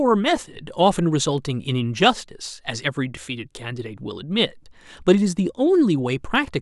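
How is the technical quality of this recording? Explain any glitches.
The recording carries a steady ticking fault through almost its whole length. Clock slip clicks run from 0.17 s to 6.61 s, roughly ten per second, so around seventy in all. They are likely caused by two devices running on unsynchronised clocks that disagree by a few hundred parts per million, forcing a single sample to be dropped or repeated each time the drift adds up. Each slip is a faint tick.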